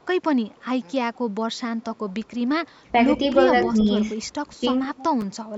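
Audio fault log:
0.00–0.06, 0.49–0.65, 1.14–1.18, 1.56–2.13, 4.86–5.35 s: echo leak. A faint copy of the speech trails the original by 177 ms, most likely because the far end plays the call on a loudspeaker and its echo canceller lets some of it back. It sits about 35 to 40 dB down for most stretches but rises to about 20 dB below at 4.86–5.35 s. The fixed lag marks it as echo rather than room reverberation, which smears continuously.
2.80–2.93, 3.67–3.77, 4.56–4.65 s: speech suppressed in double talk. The talker's level briefly sags, by about 15 dB at 2.80 and 4.56 s and only about 5 dB at 3.67 s, each dip lasting at most about a tenth of a second. The likely cause is an echo canceller turning everything down while both sides speak at once. Unlike a dropout, the speech ducks rather than vanishing into silence.
5.21–5.23 s: chunks out of order. A 10 ms piece of audio plays one chunk late, after the piece that should follow it. 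Nothing is missing, but the swapped order leaves hard joins and a tiny jumbled blip. It falls inside the loudest echo stretch, but the echo is a smooth delayed copy, whereas this is an abrupt stutter.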